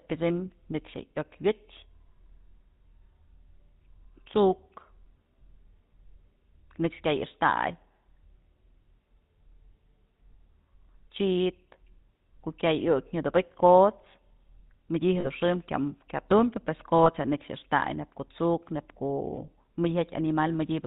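A buzzy, gravelly roughness runs through the whole speech clip, and nothing above 4 kHz comes through, so sibilants sound dull and clipped. That is the signature of the GSM full-rate codec, at a level that fits its 13 kbps rate. It models the vocal tract as a filter and drives it with a sparse train of regularly spaced pulses that keeps only every third excitation sample. That coarse excitation gives the grainy, reedy edge heard here.

From 15.2 to 15.27 s the sound is briefly frozen into a rough, metallic ring before normal speech resumes. A shorter ring of the same kind follows from 17.04 to 17.07 s. Both are lost GSM frames. When a frame arrives damaged, the decoder reuses the last good frame's settings, with the level usually falling from the second lost frame on. The first gap's length suggests two dropped 20 ms frames, and the second suggests one.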